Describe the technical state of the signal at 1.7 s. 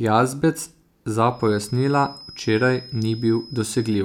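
At 1.7 s a thin, steady whistle near 5.1 kHz sits behind the speech, about 20 dB below it and swelling and fading slowly in level. It begins at 1.26 s and carries on to the end of the clip. This is a feedback whistle, likely caused by the loudspeaker-to-microphone loop hovering right at its feedback point, so a single high frequency keeps ringing without building into a full howl.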